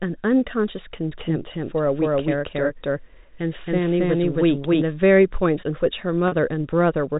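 From 1.12 to 4.82 s the speech is doubled: a second, equally loud copy trails by about a third of a second, likely captured again through a slower path. It starts and stops abruptly and has no decay or room colour, unlike an acoustic echo or reverb.

At 6.28 s, packet loss with pitch repetition bridges a 40 ms gap by repeating the last pitch period, so the sound briefly holds as a slightly buzzy tone rather than falling silent as a plain dropout would, then resumes.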